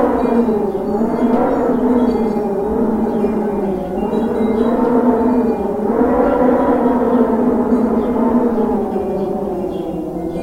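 Listening to this recording of sounds, nothing technical stood out as wrong at any point.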